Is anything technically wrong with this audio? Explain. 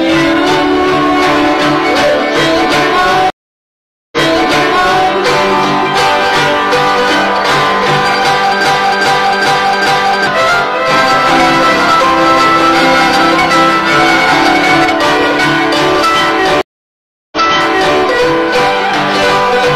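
Yes, there are three kinds of fault.

Stream reconnect, at 3.3 to 5.1 s and again at 16.61 to 17.97 s. The connection dropped, the player fell silent, then reconnected with a fresh decoder. The first gap lasts 820 ms, and the sound picks up 975 ms earlier than where it broke off. The second gap lasts 706 ms and rewinds 650 ms. Each time, a stretch of audio you have just heard is replayed.

Broken-record loop, from 8.66 to 10.27 s. Something in the chain stalled, likely the player, encoder or stream, and kept resending the last fragment it held. A 0.40 s piece repeats exactly four times back to back. The audio that belonged in that window never plays.

Doubled audio track, from 10.91 to 14.85 s. The same audio is mixed in a second time, likely through a slower capture path or a misaligned edit. A full-band copy trails roughly one and a half seconds behind at about 5 dB below the original. 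It is dry, with no decay, and it cuts in and out abruptly.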